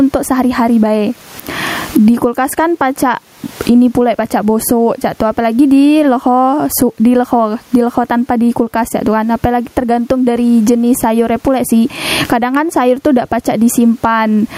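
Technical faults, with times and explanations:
Throughout, gain pumping. Room noise sits about 41 dB below the speech, and the gain swings around 20 dB. The speech sounds squashed. Likely cause: gain set far too high, with a fast limiter pulling it down on peaks.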